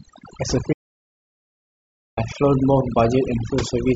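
A speech clip where overdone noise removal, with a noise reduction stage set far too aggressively, pulls individual frequency bands down throughout, leaving a lowered background that breaks up into twinkling specks. An audio dropout to silence, likely from the input being lost while recording continued, cuts the sound from 0.73 s to 2.17 s, leaving about 1.44 s of dead silence with no room tone.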